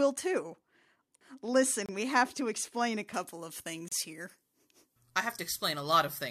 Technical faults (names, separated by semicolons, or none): gap between stream segments; pre-emphasis left on